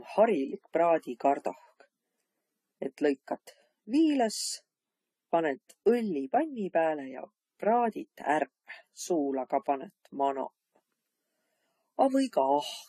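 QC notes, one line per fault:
throughout, transcoding between lossy codecs: likely a low-bitrate AAC encode re-encoded to Vorbis, so two layers of codec artefacts sound together, with nothing above 14 kHz.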